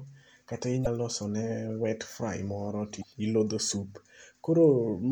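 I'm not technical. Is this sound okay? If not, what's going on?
No. Damaged data in a compressed stream causes brief glitches at 0.83–0.87 s and 2.99–3.04 s (just after "fry moro to"). The player stumbles over corrupted bits, so the sound briefly breaks up there.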